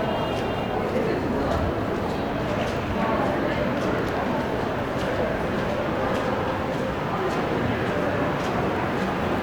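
No technical faults are audible.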